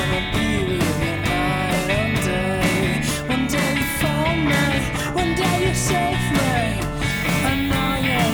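From 7.11 s to the end at 8.33 s, the audio is requantised to about 7 bits with noise shaping, a low bit depth with noise shaping fault: the coarse rounding error is fed back through a filter that shoves it away from the low and middle range and into the upper band. The result is a steady, thin hiss that climbs steeply toward the top of the spectrum, sitting roughly 20 dB below the sound itself across those final seconds.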